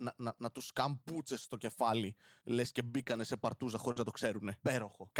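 Just after "στο κεφάλι λε και", from 2.99 to 3.01 s, comes a lost packet rebuilt from error correction. The next packet carried a low-bitrate copy, so nothing drops out, but the sound turns rough and noisy. From 3.03 to 3.08 s, short concealed packet loss follows. About 20 ms never arrived, and the decoder extended the previous sound to fill it, leaving a brief smear. Rebuilt frames return from 3.08 to 3.22 s, rougher across 80 ms, which points to four lost packets, before "σε παρτούζα". At 3.92 to 3.98 s, a second concealed loss of about 40 ms wobbles, and its last 20 ms, 3.96 to 3.98 s, is rebuilt from the error-correction copy.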